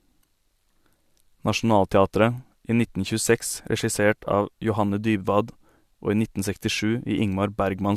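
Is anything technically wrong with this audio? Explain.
No, nothing here sounds technically wrong; it's just speech coming through without any trouble that I can hear.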